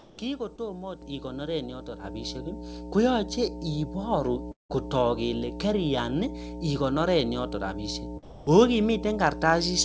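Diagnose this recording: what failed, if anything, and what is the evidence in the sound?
In the analogue wiring, a ground loop or nearby transformer is letting the power line into the signal. The result is mains hum, a steady 60 Hz tone with low harmonics. It runs through the whole speech clip at a level only about 5 dB below the signal.

In the call processing, the sender's discontinuous transmission was likely idle for the first 0.18 s, and the receiver filled that stretch with comfort noise in place of the background. It is a steady, featureless hiss about 2 dB quieter than the real background that follows.

On the network, a short concealed packet loss at 0.56 to 0.60 s left about 20 ms missing. The receiver stretched the last sound across the hole and blended back into the real audio, which gives a brief smear or wobble.

The call software stepped the microphone volume up twice. The first step, of 6 dB, comes at 1.02 s, and the second, of 5 dB, at 2.04 s. 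Each time the speech and background jump up in level together in one step.

A long network dropout at 4.52 to 4.71 s likely lost about 180 ms of audio. The receiver continued the last sound as a buzz or hiss that fades, and about 150 ms of near silence followed. Speech returns at "kotook kele" with the missing part gone.

At 8.23 to 8.47 s the sound was likely dropped by the voice detector. For 240 ms the speech gives way to steady comfort noise, and it comes back when the detector triggers again.

The call path is a G.722 link, which fits a bitrate of about 64 kbps. It passes nothing above 8 kHz.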